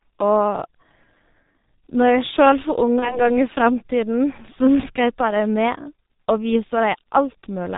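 Throughout, the speech is muffled and hoarse, with nothing above 4 kHz and blurred consonants. This is heavy G.723.1 codec damage: the codec squeezes speech into 30 ms frames at a very low rate, which fits its 6.3 kbit/s mode, and updates its voice model sluggishly.

From 2.99 to 3.27 s, the voice is stretched and weakened, then recovers gradually. This is VoIP packet loss concealed by the speech codec. About 30 ms of audio went missing, which points to a single lost frame, and the decoder filled it by extending its last pitch and filter at a falling gain. Because each frame builds on the last, the distortion lingers well beyond the gap.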